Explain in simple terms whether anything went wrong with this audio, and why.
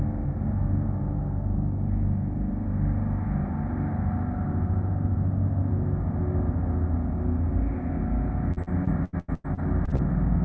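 From 8.53 to 10.01 s the sound turns choppy and robotic. This is repeated packet loss: ten short dropouts, each up to about 0.1 s, were patched by stretching the previous sound.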